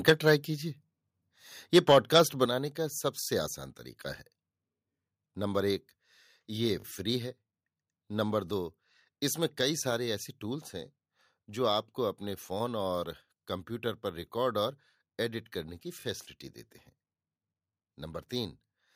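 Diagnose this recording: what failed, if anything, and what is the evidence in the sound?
Microphone overload at the converter: harsh, crackly flat-topped peaks at 0.07–0.13 s (about 9 dB over) and 1.75–2.21 s (about 5 dB over). Likely the mic input set too hot.

Microphone volume stepped down in call processing: abrupt level drops of about 4 dB at 0.1 s and about 7 dB at 2.46 s, likely the software cutting input gain after clipping.

Repeated buffer at the driver or buffer stage: buzzy stutters at 3.2–3.28 s (four extra plays), 6.8–6.84 s and 16.0–16.04 s (two each), fitting a 20 ms buffer replayed.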